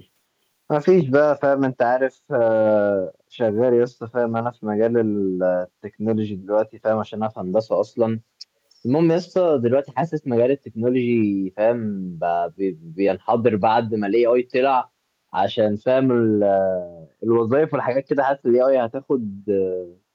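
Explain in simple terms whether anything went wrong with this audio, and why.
Something went wrong: an echo leak, likely because the far end plays the call on a loudspeaker and its echo canceller let a small scrap of this speech slip back. At 8.71 to 8.75 s you hear a very faint, brief repeat arriving about 0.3 seconds late.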